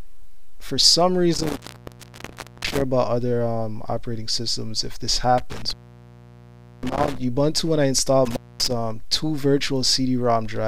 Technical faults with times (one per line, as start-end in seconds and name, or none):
1.34-2.81 intermittent contact
5.38-7.18 intermittent contact
8.25-8.71 intermittent contact